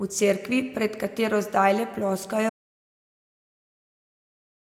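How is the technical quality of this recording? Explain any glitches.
The recording has one clear glitch: an audio dropout to silence from 2.50 s to the end. The speech stops abruptly and digital silence follows, with no room tone or hiss. The likely cause is lost input, such as a disconnected device or mute, while recording continued. Unlike a fade-out or noise gate, there is no taper and no residual background.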